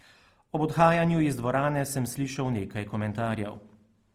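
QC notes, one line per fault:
Throughout, Opus compression. The speech is plainly rough and grainy, with a noisy texture over its tones. It still reaches the full bandwidth, so it is not muffled. This is likely CELT mode short of bits, filling bands with folded or noise content, which fits roughly 24 kbps.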